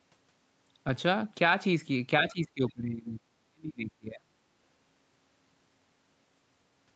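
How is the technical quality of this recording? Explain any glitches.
The recording has two glitches, both in the middle, and everything is band-limited with nothing above 8 kHz, which fits a call codec.

From 2.24 to 4.34 s there's speech suppressed in double talk. The voice dips sharply, by around 40 dB at worst, for roughly two seconds, likely because the echo canceller ducked everything while both ends talked.

From 2.69 to 2.73 s there's a brief scrap of the other side's voice leaking through. It's very faint, some 35 dB below the talker, likely echo the canceller didn't fully remove.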